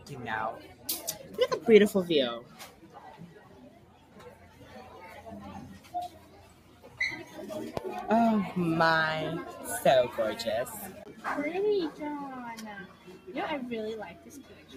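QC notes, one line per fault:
Throughout: noise suppressor applied to music or sounds. A speech-tuned suppressor stays active on this audio. It mistakes steady and sustained content for noise and pulls it down. The gain swings by roughly 10 dB, so the level pumps and the sound thins.
0.64–0.88 s, 2.43–3.0 s, 3.23–4.73 s, 5.79–6.99 s, 12.85–13.29 s, 14.12 s to the end: sound cut by the noise suppressor. Held and decaying parts sink by up to about 7 dB. Tails get cut short. Sharp onsets still pass, so each stretch sounds hollowed out.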